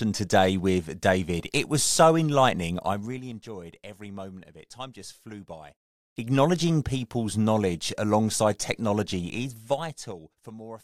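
From 2.74 to 3.39 s, zipper noise rides on the speech. The level drops about 15 dB in coarse 3 dB steps, around seven a second. Each unsmoothed step clicks. From 9.27 to 10.59 s it returns, falling about 20 dB at roughly five steps a second.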